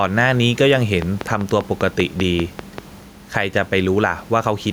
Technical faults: gain pumping; train of clicks

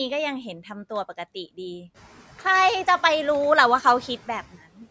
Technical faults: speech cut by the noise suppressor

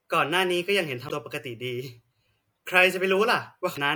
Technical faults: damaged data in a compressed stream

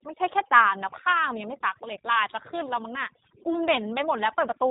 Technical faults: overdone noise removal; G.729 codec

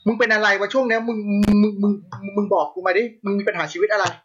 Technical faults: loose connector crackle

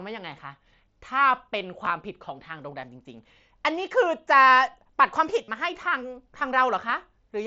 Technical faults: concealed Bluetooth headset packet loss

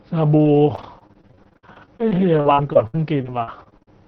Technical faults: repeated packet loss (robotic sound)

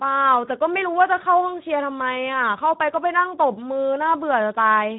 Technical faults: Speex codec

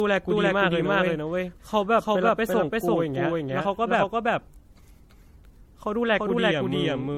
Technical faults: doubled audio track; generation loss

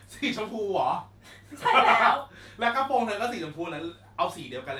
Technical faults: none

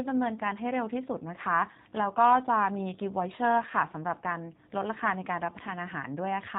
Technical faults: G.729 codec

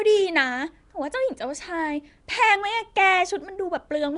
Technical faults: Nellymoser compression

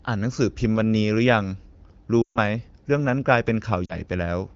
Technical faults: lost AMR speech frames

